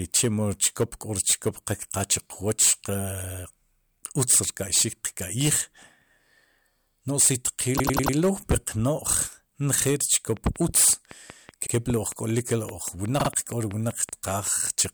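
Hard clipping runs through the whole speech clip. The signal is driven about 17 dB past what the chain can pass, so a few percent of samples are cut flat. The waveform shows squared-off peaks, the spectrogram shows harmonic smear reaching high, and loud syllables sound harshly fuzzed.

Repeated frames follow "no si" at 7.77 s. A 96 ms block plays four extra times until 8.15 s, adding 384 ms. It is heard as a stutter, and it appears as identical repeating waveform blocks.

A train of clicks starts at 10.37 s and runs to 14.87 s. About twenty regular pulses arrive at 5.3 per second, roughly as loud as the speech, and they tick through the pauses too. They show as evenly spaced vertical lines spanning the spectrogram. The likely cause is electrical interference.

Repeated frames return at 11.65 s, where a 72 ms block plays once more, and at 13.19 s, where a 48 ms block repeats twice to add 96 ms. 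Each causes a brief stutter.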